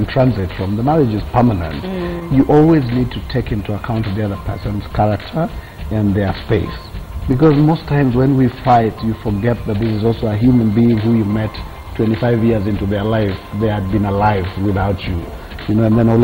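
From the very start there's clock drift between sender and receiver: the sending end's clock runs roughly 4% slow compared with the receiving end. So audio arrives a little slower than it's played out, and the jitter buffer keeps sliding toward empty. The receiver has to pad things out to avoid running dry, and that shows up as small, unevenly spaced timing hiccups that never go away for the whole clip.

Those repeated timing corrections run from about 0.18 s right through to about 16.16 s. Each one repeats a short piece of audio to stretch playback, always in the same direction, so the net effect is like hearing things at about 96% speed, with something like 0.7 s added overall. Individually they're tiny.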